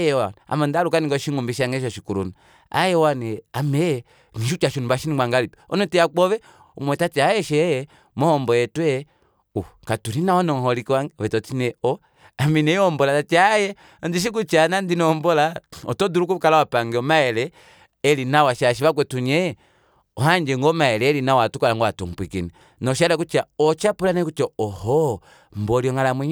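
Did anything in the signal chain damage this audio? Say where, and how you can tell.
No, no signal-chain damage heard.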